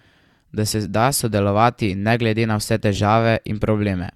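Dropped samples at 1.96 s produce a single sharp click in the speech. A fraction of a millisecond of the stream is most likely missing, so the waveform leaps straight to a later value. The gap is far too brief to lose any sound.

A corrupt frame is decoded from 2.95 to 2.98 s, a burst lasting about 20 ms that fits one damaged compressed frame. Flipped bits made the decoder place energy at the wrong frequencies, giving a brief chirp, squeak, blip or burst of noise that peaks at about -10 dBFS.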